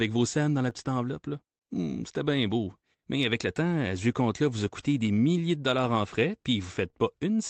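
Throughout the clip there is clock drift between sender and receiver: the sending side's clock runs roughly 3 percent slow, so the jitter buffer keeps draining. Unlike network jitter, which comes and goes, this pull never changes direction, and the small timing hiccups recur unevenly for as long as the audio lasts.

From 0.38 s to 6.59 s the receiver makes repeated timing corrections, stretching the speech to 98 percent speed and adding around 150 ms in total by repeating short pieces. These edits are all in the same direction, so the tempo drags slightly and unsteadily rather than skipping ahead.

At 6.90 to 6.95 s a short stall from a late packet holds the last sound for 30 ms until the data arrives. Nothing is lost and the speech resumes from the same point, unlike a dropout or a cut. The trace is a brief sound held too long, with a slight buzz or dip, and the delay grows by 30 ms. The band limit near 8 kHz and the coding noise fit the Opus call path at a low bitrate.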